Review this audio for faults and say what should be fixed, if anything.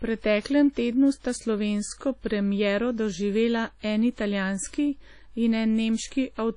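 Throughout the speech there is plainly audible damage that sounds like WMA compression, likely from encoding at a low bitrate, around 32 kbps. The transform codec's quantisation noise smears over tens of milliseconds, giving a ringing, washy texture and a hiss that rises and falls with the speech. On a spectrogram the energy stops at a hard ceiling near 10.1 kHz, with blurred, smeared detail below it. To prevent this, keep the original or re-encode from it at a higher bitrate or losslessly.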